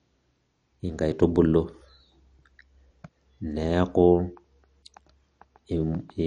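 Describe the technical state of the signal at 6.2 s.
At 6.2 s the speech carries the same degradation heard across the whole clip, most likely MP2 compression. Nothing is present above 11.3 kHz, where upper sub-bands have been switched off for lack of bits, and the bands that remain are coarsely quantised and flicker in and out. The result is a dull top end with a gurgling, granular texture on the speech, plainly audible, which points to a low bitrate of roughly 48 kbps.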